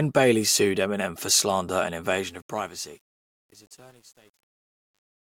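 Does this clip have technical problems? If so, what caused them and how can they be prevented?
Yes. Truncation distortion on a fade runs from 2.11 s to 5.27 s, as the speech fades out over the last three seconds or so. The fade's level drops, but the gain stage rounds each sample to a coarse grid with no dither, which fits a path of about 9 bits. The waveform turns into a few square steps, so from 2.7 s to the end the quiet tail turns gritty. To prevent it, apply fades at a high internal bit depth and add dither whenever reducing word length.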